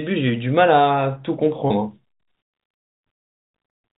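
A speech clip carried over G.711 telephone coding, which limits the sound to below 4 kHz. There is packet loss with pitch repetition from 1.68 to 1.70 s. About 20 ms of audio went missing, which fits a single lost packet. The receiver filled the gap by repeating the last pitch period, so the sound briefly holds with a slight buzz.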